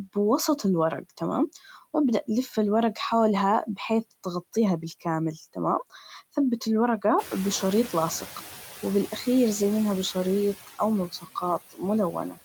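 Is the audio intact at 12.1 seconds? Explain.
No. From 12.12 to 12.39 s there is speech cut by the noise suppressor: it mistook soft speech for noise and lowered it by up to about 13 dB for roughly a tenth of a second, leaving the sound swallowed. The waveform shows a sudden dip in envelope, and the spectrogram shows faded, patchy energy. Noise suppressor artifacts also run through this moment, with the noise cut by about 15 dB, visible as gated residue that sinks between louder frames.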